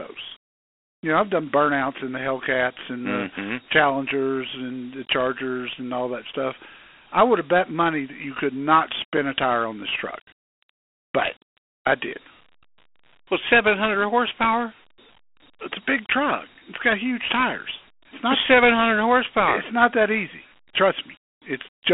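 Throughout, the speech carries Dialogic VOX ADPCM damage. Each sample is stored as a coarse 4-bit step, which leaves a gritty hiss riding on the speech. The spectrogram shows energy only between 250 Hz and 3.4 kHz and nothing above 3.8 kHz, consistent with 8 kHz sampling at about 32 kbps.

At 9.17 s there is a block of digital silence about 5 ms long. The output buffer was likely not filled in time, so zeros took the place of samples. It is heard as a tick or dip. The waveform shows a flat, near-silent stretch with abrupt edges, and the spectrogram shows a thin vertical broadband stripe at each edge.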